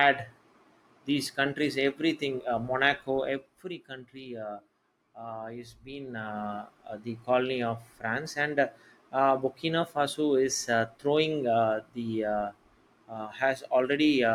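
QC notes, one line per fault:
3.14–3.67 s, zipper noise: after "these countries everything uh", level drops about 10 dB in coarse, unsmoothed steps, roughly 40 per second, each step clicking into a zipping texture.
5.94–6.50 s, zipper noise: after "country uh uh is", level rises about 10 dB in the same stepped fashion, roughly 40 steps per second, so the discontinuities tick audibly.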